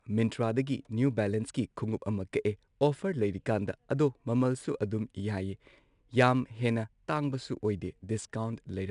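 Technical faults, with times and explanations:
Throughout: 4-bit ADPCM compression. Plainly audible gritty hiss rides on the speech, rising and falling with its loudness, and sharp onsets sound roughened. Each sample is coded as a coarse 4-bit step from a predicted value. That error becomes broadband noise that tracks the signal level, and the adaptive step size cannot grow fast enough on sudden attacks. Nothing is present above 10.6 kHz, so the top end sounds dulled, which fits a low sample rate near 22 kHz and a bitrate of around 89 kbps.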